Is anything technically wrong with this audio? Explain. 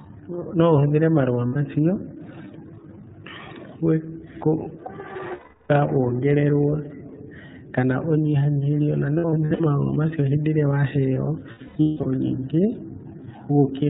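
Yes. The whole clip carries iLBC codec damage that is plainly audible. It is narrowband, so nothing above 4 kHz survives. At the roughly 13.3 kbps the sound points to, each 30 ms block is coded on its own. The speech stays clear but has a rough, slightly synthetic edge, and it lacks any of the air or sibilance that higher frequencies would carry.

Lost iLBC frames break up four passages: 1.47 to 1.57 s (90 ms), 5.33 to 5.71 s (360 ms), 9.18 to 9.60 s (about 210 ms of gaps spread over 420 ms, none much longer than a few frames), and 11.51 to 12.06 s (about 390 ms of gaps spread over 540 ms, the longest near 200 ms). Each time, the decoder covers the gap by repeating the last pitch cycle with added noise, so the speech turns into a held, buzzy or breathy vowel that fades over the longer gaps. Because every frame decodes independently, the speech snaps back as soon as packets resume.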